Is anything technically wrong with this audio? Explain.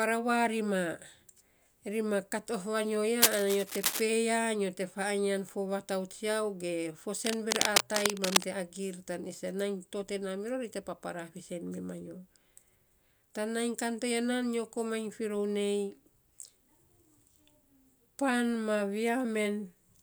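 Yes. Cable scratch noise occurs twice, from 3.21 to 4.02 s and from 7.25 to 8.46 s. A worn cable or connector was likely being moved, its contact resistance jumping erratically, so ragged bursts of scratching and rustling, roughly as loud as the speech, cover it.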